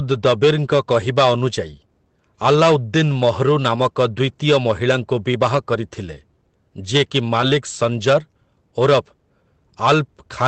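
Lost packets rebuilt from error correction occur at 0.93–0.95, 3.75–3.77, 6.07–6.09 and 7.41–7.43 s. Each time a single 20 ms packet went missing, and the decoder played the coarse low-bitrate copy carried in the following packet. So there is no dropout, just a brief rougher, noisier patch within the 8 kHz band of the Opus call path.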